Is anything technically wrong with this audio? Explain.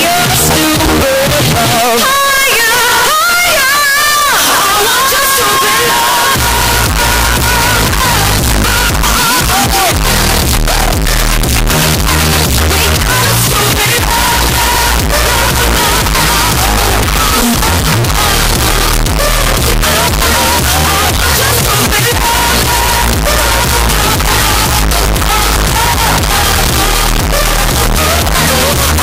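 Yes, the whole clip is buried in loud, harsh distortion from start to finish, and even the quiet stretches come through as loud as everything else. That points to signed and unsigned mixed up, likely at the 16-bit conversion stage: flipping the top bit makes every zero crossing leap across the full range.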